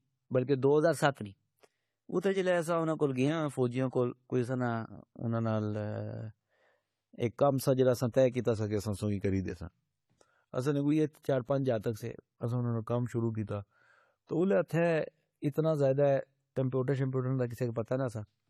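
Throughout the speech, a smeared, watery high end suggests low-bitrate audio saved at a high bitrate, likely a 32 kbit/s AAC encode re-saved as 256 kbit/s MP3. On a spectrogram, the upper band looks sparse and blotchy despite the large file. From 0.84 to 3.28 s the speech runs 6.4% fast and about 107 cents sharp. From 8.55 to 10.92 s and again from 12.45 to 14.41 s it runs 6.4% slow and about 114 cents flat, then snaps back each time. These are drift correction steps, likely from clock-matching software resampling in a jump. On a spectrogram, the harmonics shift up or down in a block at each boundary.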